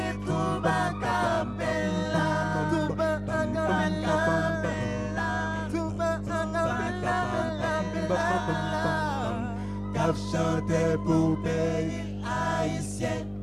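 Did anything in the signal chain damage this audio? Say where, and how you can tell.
Yes. Mains hum runs through the whole clip, a steady low tone at 50 Hz with a few low harmonics above it, sitting only about 5 dB below the wanted sound, so it is loud and constant rather than a faint background buzz. This points to the analogue wiring stage: a ground loop or a nearby transformer has coupled the 50 Hz power line into the signal before conversion, and the hum's unchanging pitch and level betray that source.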